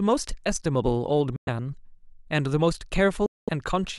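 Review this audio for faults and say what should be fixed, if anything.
The speech cuts to silence from 1.36 to 1.49 s and again from 3.26 to 3.49 s, then resumes further on, with about 0.11 s and 0.21 s of audio skipped. These are likely Bluetooth dropouts, where late packets were discarded. Prevent this by shortening the distance to the headphones, clearing obstructions and 2.4 GHz interference, or choosing a more robust codec setting.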